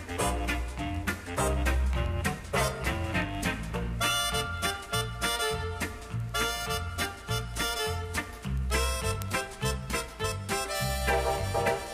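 From 0.13 s right through to 11.93 s there's a steady run of word clock ticks, about one every 70 ms, a couple of hundred in all. The receiving device isn't locked to the sender's clock, which is off by a few hundred parts per million, so each slip drops or repeats a single sample.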